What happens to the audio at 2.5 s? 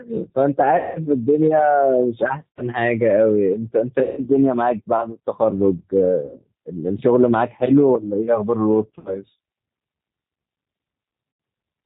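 At 2.52 s a short dropout begins, masked by VoIP packet loss concealment in the speech codec, and it lasts until about 2.63 s. Roughly 80 ms of audio never arrived, which fits four 20 ms packets. The decoder fills the gap by repeating its last pitch and vocal-tract filter at falling gain, so the speech smears into a fading, buzzy tone or coloured noise. Because each frame builds on the previous one, the signal stays weak or distorted for a short time after 2.63 s.

That moment also carries the G.729 codec damage heard throughout, here G.729A at 8 kbit/s. The codec models speech as a filter excited by a pitch predictor and a few pulses per 5 ms subframe, and discards everything above 4 kHz. The result sounds band-limited and plainly rough and synthetic, and that coarseness colours the concealed stretch as well.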